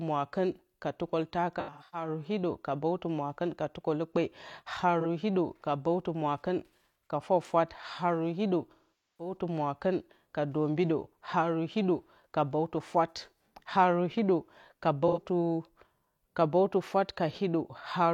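Speech with AAC frame loss with concealment at 1.59–2.08 s (before "hiɗǝ ka bǝwtǝ mwakɨn"), 5.00–5.06 s, 8.71–9.37 s (between "ka fwafwat haru hiɗǝ" and "mwakɨn ka dombido haru") and 15.07–15.21 s. The decoder rebuilds missing frames from the last good spectrum, producing smeared, phasey patches in the shorter losses and, in the long 8.71–9.37 s loss, a decay to a very faint noise floor before the sound fades back in, rather than the hard silent gaps of a plain dropout.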